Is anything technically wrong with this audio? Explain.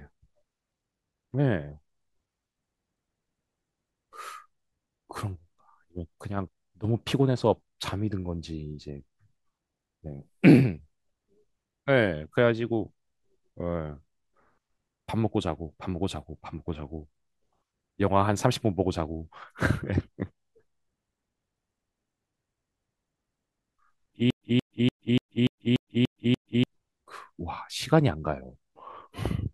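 Yes. From 24.30 to 26.64 s there is a stutter with silent gaps, likely from the stream stalling and replaying its last fragment at each retry. The same 181 ms burst returns eight times, each followed by 110 ms of digital silence, a steady 291 ms cycle, and the speech for that stretch is lost.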